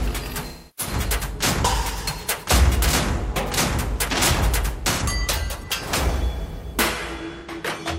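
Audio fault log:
0.48–0.93 s, 4.92–5.02 s, 7.40–7.51 s: AAC frame loss with concealment. The decoder fills each gap from the last good spectrum. The first gap, about 0.3 s long and consistent with roughly seven lost frames, smears the sound. The two later gaps, about 85 ms each, are brief phasey, noisy patches.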